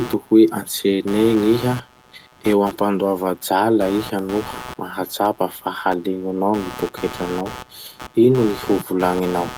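Speech carrying a buzzy, chirping pulse near 150 Hz throughout, roughly 15 dB under the voice: computer activity noise, from load changes shifting the shared audio ground.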